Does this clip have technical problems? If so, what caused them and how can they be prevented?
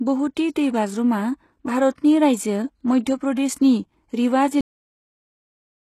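Yes. Throughout the speech, the sound has gritty, metallic sibilants and a synthetic-sounding top end, with nothing at all above about 12.3 kHz. This is likely HE-AAC compression. The codec encodes only the lower band properly and fills in the treble through spectral band replication. Its harmonics don't line up with the real ones, and the damage is plainly audible here. It fits a very low bitrate in the region of 16 kbps. Prevention: encode at a higher bitrate with plain AAC-LC, or use a codec that keeps the full band.

At 1.95 s, a short hiss of about 28 ms runs up to 1.98 s, just ahead of a sharp attack, and the onset sounds softened. This is pre-echo. The transform block that contains the transient spreads its quantisation noise across its whole length, so noise scaled to the loud attack also leaks into the quiet moment before it. Prevention: give transients more bits or use an encoder with good block switching to short windows.

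Right after "प्रदेशनि रिवा", at 4.61 s, the audio stops abruptly mid-sound and drops to digital silence for the remaining 1.3 s, with no natural decay. This is a cut-off end. The final buffers of audio were never written out or played back, so the signal simply ends where the data ran out. Prevention: flush and close the recording or encoding pipeline completely before finalising the file.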